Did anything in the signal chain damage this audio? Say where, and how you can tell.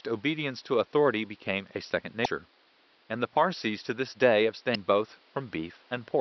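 Yes. The damage is at the codec or storage stage: damaged data in a compressed stream, heard as two brief glitches in the speech, from 2.22 to 2.26 s and from 4.72 to 4.76 s, each about 40 ms long. Corrupted bytes made the decoder misread those frames and lose sync until it found a valid frame header. On a spectrogram each shows as a short disruption, and the waveform breaks abruptly there. The faint room noise, about 35 dB below the speech, comes from the recording space and is not a fault.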